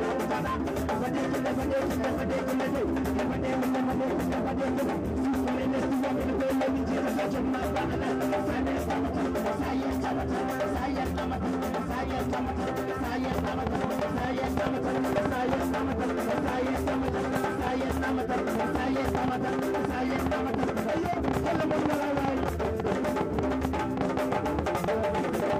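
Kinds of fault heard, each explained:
Train of clicks: a repeating pulse, likely from interference or a faulty connection, enters the signal, so from 13.32 s to 25.57 s around a hundred alike clicks tick over the sound, irregularly at about 6.9 per second, peaking roughly 15 dB above it.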